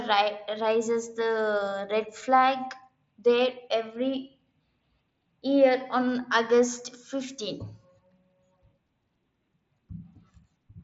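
Nothing goes wrong anywhere in this speech, which just sounds like it came over an ordinary mSBC Bluetooth headset link, with the top end stopping around 7.7 kHz the way that wideband codec normally leaves it.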